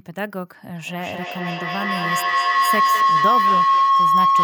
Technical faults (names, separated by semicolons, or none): feedback howl